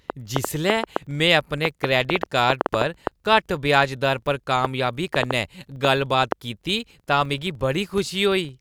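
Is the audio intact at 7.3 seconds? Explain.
No. At 7.3 s, as everywhere in this speech clip, a filter restarted on every block: it drops its stored state and begins each block from silence, which fits a 2048-sample block. Each restart leaves a small transient, heard as a buzz at about 23.4 Hz that rises and falls with the speech level.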